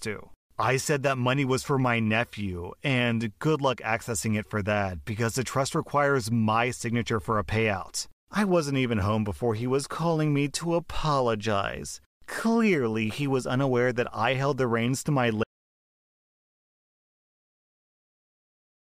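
At 12.33 to 12.35 s, just after "calling me to apologize", there is a brief chunks-out-of-order fault. One 10 ms chunk plays a chunk late, after the one meant to follow it. Nothing is missing. The swap leaves three hard joins, heard as a tiny jumbled moment.

At 15.43 s, right after "the reins to my", an audio dropout to silence begins and lasts to the end. The speech cuts off mid-phrase. No room tone remains, only silence. The input was likely lost, through a disconnect, link failure or stray mute.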